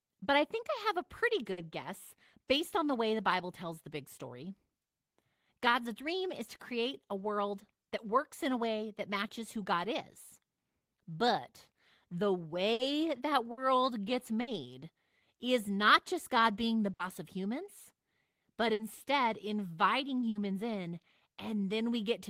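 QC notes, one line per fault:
1.51, 12.73, 13.51, 14.41, 16.93, 18.73 and 20.29 s: burst of packet loss. Each time the speech briefly freezes into a held buzz or fading hiss for about 60 ms, then jumps ahead with about 60 ms of speech gone. Several consecutive packets never arrived in time, so the receiver stretched the last good sound and faded it down until audio resumed later in the stream. The events cluster between 12.7 and 20.4 s.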